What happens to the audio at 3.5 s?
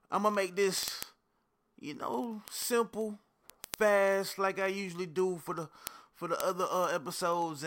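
At 3.5 s the speech is under word clock ticks, which run from 0.10 s to 7.62 s. The receiving clock is off by about 500 ppm. Roughly every 0.05 s one sample slips. This gives a steady stream of sharp, uneven ticks.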